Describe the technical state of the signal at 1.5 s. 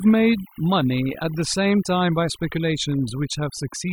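At 1.5 s the speech carries overdone noise removal, present throughout the clip. The noise reduction is set too hard. Frequency bands near the noise estimate are pushed down or cut. The background drops and breaks up into twinkling specks.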